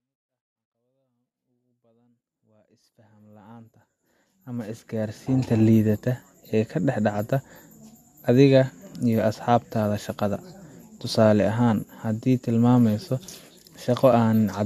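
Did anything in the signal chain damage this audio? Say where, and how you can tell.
No, nothing in the chain has hurt this speech clip; the level just rises in a smooth fade from the very beginning up to about 5.66 s, the way an editor would shape it, and that's deliberate rather than damage.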